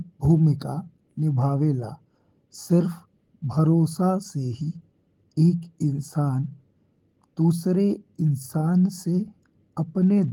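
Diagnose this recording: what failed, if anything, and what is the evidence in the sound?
The failure sits at the buffer stage of a network link: clock drift between sender and receiver, with the sender's clock running roughly 5 percent fast. More audio arrives than the receiver plays out, so its jitter buffer keeps filling. A plain sample-rate mismatch would shift pitch evenly. Here the pitch holds steady, and the surplus is instead removed in small discrete pieces, which marks this as a clock-drift problem rather than a resampling error.

The evidence is a string of repeated timing corrections running from 0.10 s to 10.11 s. The receiver trims short pieces to keep pace, and the net result is speech moving at about 105 percent of its natural rate. The cuts are unevenly spaced. Packet loss would leave scattered gaps or concealment smears. These edits all go one way, always shortening, and continue across nearly the whole clip.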